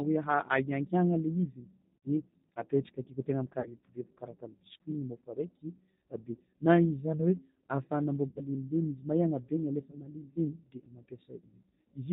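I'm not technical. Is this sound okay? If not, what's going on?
No. The speech sounds slightly rough and artificial throughout, and nothing in the upper treble comes through. That is the G.729 codec, a phone-call format that rebuilds speech from a rough model of the voice and drops everything above 4 kHz.

At about 1.97, 3.60, 8.28 and 9.91 seconds the speech briefly smears into a stretched, fading sound and sounds weak just afterward. This is VoIP packet loss concealed by the speech codec: pieces went missing, and the decoder guessed them by stretching the preceding sound.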